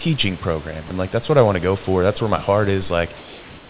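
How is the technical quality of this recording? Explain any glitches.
The recording has one brief glitch, heard over a telephone-band signal with nothing above 4 kHz, consistent with a G.711-style call codec, and room noise sitting about 23 dB below the speech.

At 0.88 to 0.90 s, just before "and like that's what", about 20 ms of sound is dropped by the voice detector. The likely cause is the sender's voice detector briefly judging the sound as background and pausing transmission, so the receiver filled the gap with comfort noise. The result is a tiny patch of steady noise or near silence in place of the signal. That sets it apart from packet-loss concealment, which would repeat or smear the preceding sound, and from a true dropout, which would be a hard silence or click.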